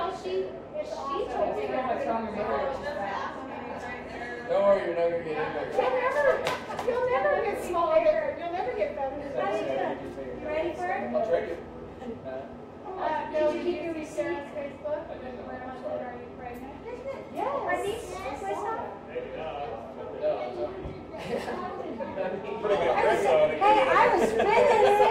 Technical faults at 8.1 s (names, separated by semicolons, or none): none